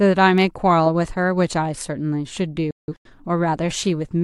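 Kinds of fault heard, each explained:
Digital broadcast dropout: the receiver lost frames and muted, so the speech snaps to silence in short holes from 2.71 to 3.10 s, totalling 256 ms.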